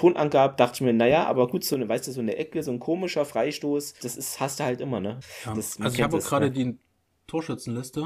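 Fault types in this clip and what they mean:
One channel drops out: right after "naja aber gut so", at about 1.74 s, the speech suddenly drops by about 6 dB and stays down to the end. That's likely one side of a stereo pair going silent, so the mono sum keeps only half of what both channels shared.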